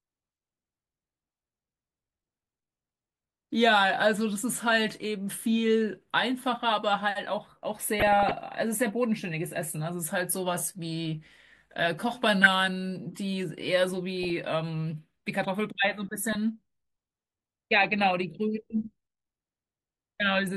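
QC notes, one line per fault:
8.00–8.31 s, 12.43–12.53 s, 14.12–14.30 s, 16.09–16.35 s: DAB burbling. Bit errors of a few tenths of a percent corrupt MP2 sub-band samples, producing short blips of noise in single sub-bands. On the spectrogram, isolated bands flicker as blocky patches.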